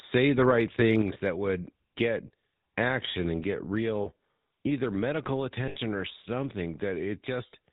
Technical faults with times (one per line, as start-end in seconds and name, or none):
0.00-7.73 GSM full-rate codec
4.02-4.08 lost GSM frames
5.68-5.77 lost GSM frames